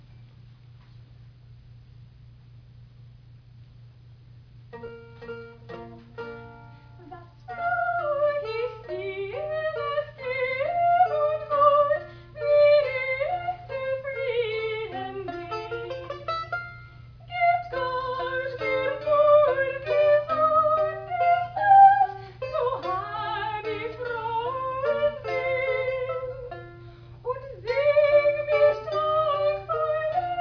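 No faults can be heard anywhere in the recording.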